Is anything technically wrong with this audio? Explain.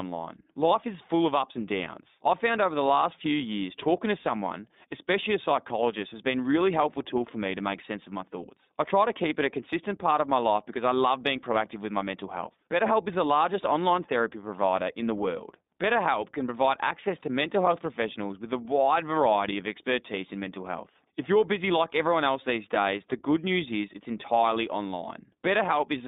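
Yes. Throughout the speech, the iLBC codec leaves plainly audible damage. This narrowband VoIP coder treats each short frame independently, here using 20 ms frames at around 15.2 kbps. The line passes only about 200 Hz to 3.7 kHz, so the voice sounds thin and telephone-like, with a slightly rough, synthetic grain. A spectrogram shows a hard ceiling near 3.7 kHz with nothing above it and little energy under 200 Hz.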